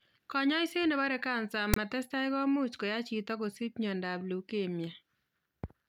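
File tags played as audio, from 1.74 to 1.76 s: for about 27 ms the player treats a block of metadata as if it were sound. The tag text, read as sample values, sits well off the centre line, so it comes out as a loud, lopsided rasp. The zero padding that follows reads as dead silence. The whole event cuts into the speech as a brief burst of static with abrupt, hard edges on both sides.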